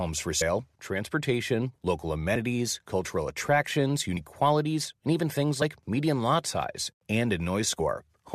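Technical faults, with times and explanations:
0.40, 2.35, 4.16, 5.61 and 7.79 s: compressed frames skipped. The speech jumps forward by whole 21.3 ms frames each time, which fits a 1024-sample codec frame. That loses roughly 70, 40, 70, 40 and 20 ms of audio. The overlapping neighbour frames blend across each gap, so you hear a quick smeared blip, not a click. On a spectrogram, harmonics break and resume abruptly with a soft vertical smudge. The waveform envelope jumps with no sharp spike.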